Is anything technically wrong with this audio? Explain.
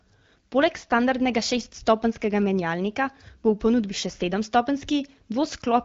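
No, nothing here sounds technically wrong.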